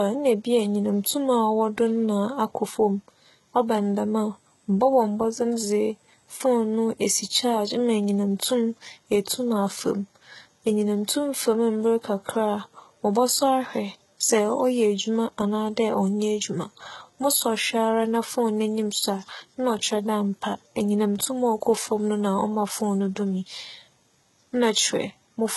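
Speech with heavy HE-AAC compression throughout: gritty, metallic s sounds, likely from band-replicated treble near 16 kbps; a spectrogram shows patchy highs ending at 11.8 kHz.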